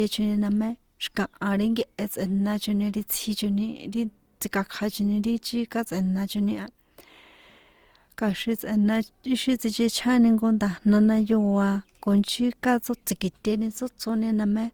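Speech with generation loss throughout: the sound is swirly, hollow and smeared, and consonant attacks blur. The cause is likely repeated Opus re-encoding, around seven passes at what sounds like a moderate 64 kbit/s. Unlike a single low-bitrate encode, the band still reaches about 20.2 kHz, yet the damage exceeds that rate.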